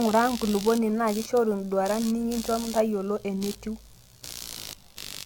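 Across the whole speech clip, computer activity noise adds a buzzy, chirping rasp pulsing at about 70 Hz, roughly 15 dB below the voice, showing as regularly spaced vertical striations on a spectrogram. The speech also sounds swirly, smeared and hollow, with blurred onsets and an empty band above 18.1 kHz. This is likely generation loss from repeated lossy re-encoding, fitting an AAC-LC chain at around 96 kbit/s.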